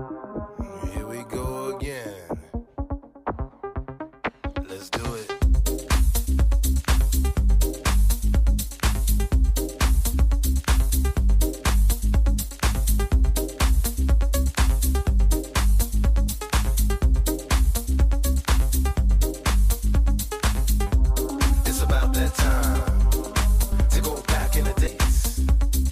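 At 4.27, 23.71 and 24.86 s there are compressed frames skipped: whole 26.1 ms blocks just don't play, so the sound lurches ahead, roughly a third of a second at the first and last, a brief sliver at the middle one. Overlapping frames smear each join into a soft blip, not a click.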